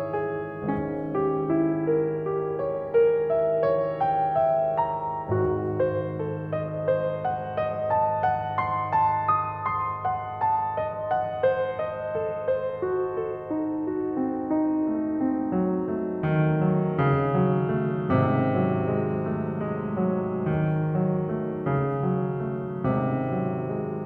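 Nothing technical stands out in this piece of music; there's no fault to point to anywhere in it.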